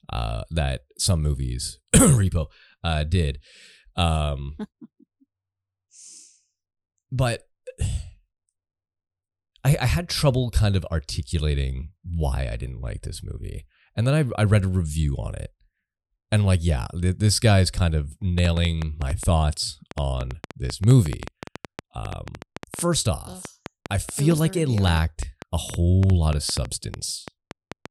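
Likely interference from nearby equipment or a faulty connection injects a train of clicks from 18.38 s to 27.87 s: about fifty similar pulses at roughly 6.1 per second, unevenly spaced, peaking about 10 dB above the speech, heard as ticking through words and pauses.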